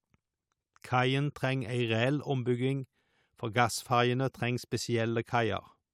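Nothing stood out as a technical fault on listening to the recording.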